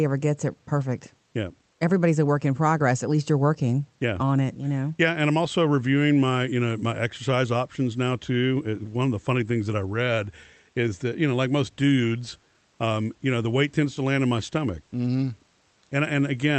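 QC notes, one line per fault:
Speech arrives through a call codec path whose audio band reaches about 8 kHz, with room noise sitting about 42 dB below the speech and no faults in the signal.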